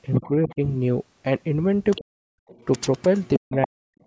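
An echo canceller that likely failed to remove all of the far-end loudspeaker signal lets the other side's voice leak through: faint at 0.14–0.55 s, clearer at 1.95–2.04 s and 2.48–3.67 s, barely audible at 4.01–4.05 s. Where both sides overlap, the canceller likely turned everything down, so speech is suppressed in double talk. It dips about 10 dB at 0.22–0.61 s and nearly cuts out, around 40 dB down, at 2.05–2.39 s and 3.39–3.88 s.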